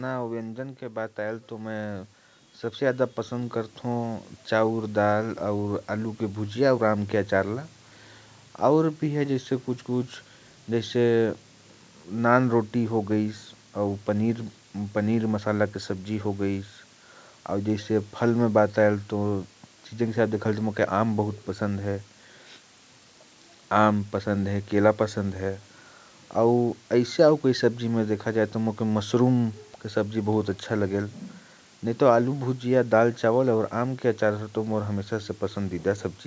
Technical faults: low bit depth with dither; automatic gain falling; automatic gain rising

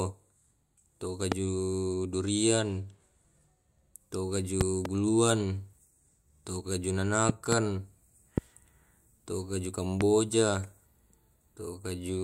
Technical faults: loud pop

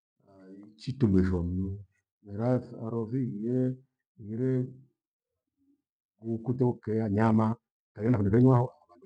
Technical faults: time-stretched section

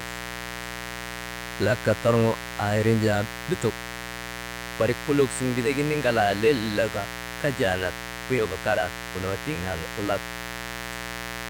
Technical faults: mains buzz

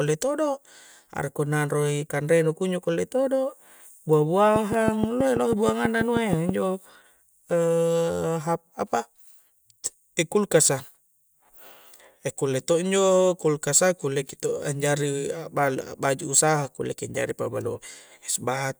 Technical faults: train of clicks

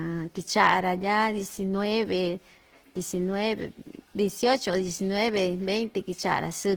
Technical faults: Opus compression

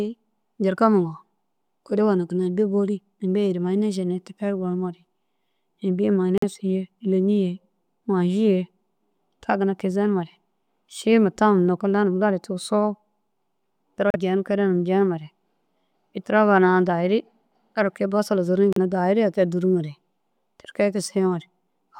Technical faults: Bluetooth stall

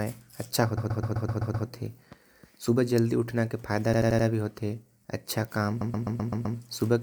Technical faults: repeated frames

